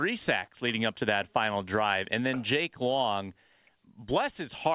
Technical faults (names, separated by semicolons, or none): short concealed packet loss